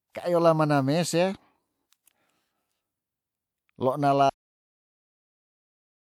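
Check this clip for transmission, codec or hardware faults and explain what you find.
There is one fault, a cut-off end. At 4.30 s the speech stops mid-sound and does not decay. The final buffers were never written or played out. Silence fills the rest of the clip, about 1.7 seconds.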